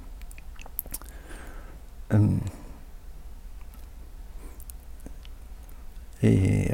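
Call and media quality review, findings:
No audible defects found in the speech recording; no ticket action required.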